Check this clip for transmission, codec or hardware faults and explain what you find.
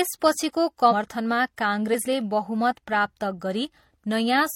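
Two brief bursts of damaged data in a compressed stream break up the speech, at 0.88 to 0.93 s and 1.90 to 1.95 s. Corrupted bytes make the decoder misread those frames and hunt for the next valid header, producing a short squawk or chirp. A dropout would leave a gap of silence instead.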